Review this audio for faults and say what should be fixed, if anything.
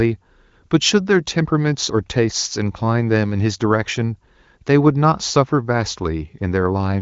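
Nothing here needs fixing: it's speech carried over the AMR wideband (HD Voice) codec at a high rate of 23.05 kbit/s, and the band stopping around 7.5 kHz is simply what that path delivers.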